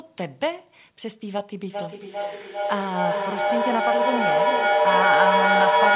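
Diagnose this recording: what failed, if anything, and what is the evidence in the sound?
Feedback echo between two devices, at the call-processing stage, runs from 1.7 s to the end of the clip. The speech comes back roughly every 400 ms, each pass thinner and more ringing, and the repeats build until they peak at about 6 dB above the speech. Room reverb decays smoothly, and a single uncancelled echo would repeat once and fade. Here a second device replays the call into another microphone, outside either echo canceller's reference, so the loop keeps feeding itself. All of this sits within the narrow telephone band, with nothing above 4 kHz.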